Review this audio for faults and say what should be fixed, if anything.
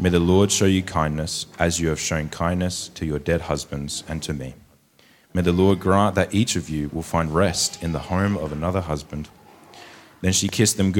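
A loud pop at 10.49 to 10.51 s stands a few decibels above the surrounding sound, which carries on underneath. It is likely a sudden voltage step from a plug, switch or static discharge, shaped into a single sharp click by the downstream circuitry. To prevent it, secure connections and switch equipment before recording starts.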